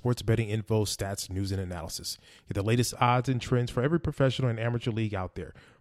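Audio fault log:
2.90–5.81 s, de-emphasis applied wrongly: a treble cut meant to undo pre-emphasis acts on speech that didn't need it, tilting the response smoothly down to about 11 dB lower at 10 kHz than 1 kHz, so it sounds dull and muffled; spectrograms show upper bands dimming.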